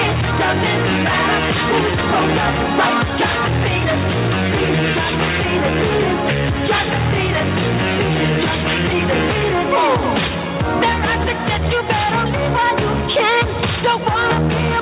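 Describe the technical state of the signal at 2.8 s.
At 2.8 s the audio is intact, with no fault, only the telephone-band sound of the G.711 call path, which leaves nothing above 4 kHz.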